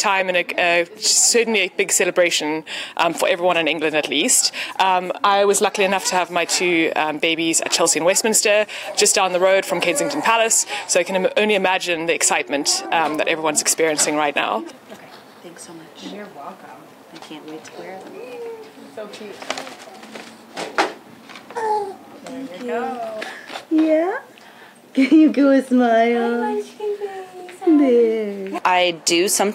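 No technical faults can be heard anywhere in the clip. Nothing in it stands out as a problem at any point.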